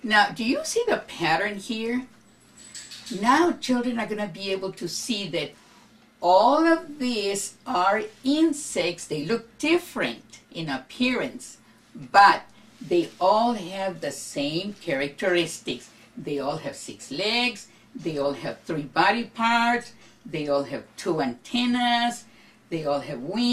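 From 15.71 to 15.88 s, a short patch of DAB burbling breaks in: a burst of gurgling, blip-like noise scattered across separate frequency bands, lasting under 0.2 s. It comes from weak reception, where bit errors at a rate of roughly a tenth of a percent slip past error correction into the MP2 audio data. Corrupted samples inject brief noise into individual sub-bands, and any corrupted scale factors make a band jump in level for up to a frame. About ten frames are damaged.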